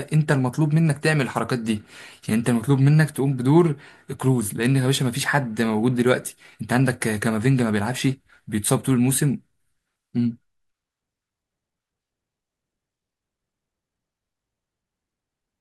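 No technical faults are audible anywhere in the recording.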